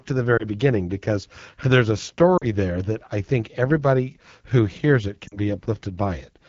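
Speech carried over the AMR wideband (HD Voice) codec at a very low rate, likely around 8.85 kbit/s, turns plainly rough and raspy throughout as its thin vocal tract model struggles. Lost AMR speech frames, about 20 ms at 0.37 s between "to the" and "beginning because there's a" and about 40 ms at 2.38 s and 5.28 s after "everybody who hears it", leave the decoder guessing from the last good frame, so the sound briefly dips or warbles, falling to near silence in the 40 ms gaps.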